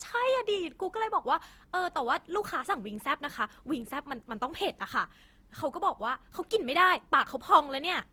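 Speech runs throughout with generation loss: the audio has a swirly, smeared, hollow character, with noise that sounds worse than a single encode at this quality would produce, and consonant onsets are blurred. The likely cause is repeated lossy re-encoding, about five passes, each quantising on a shifted frame grid so errors stack. The band reaches up to about 20.2 kHz, which fits an Opus chain at 48 kbit/s.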